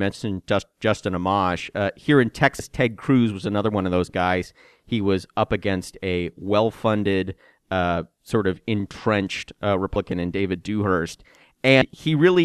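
At 2.59 s, 9.96 s and 11.81 s the speech jumps forward. These are compressed frames skipped, where whole 26.1 ms frames never reach the output. Each gap drops roughly 100 to 150 ms, fitting several lost frames. Overlapping neighbours smear each join into a soft blip.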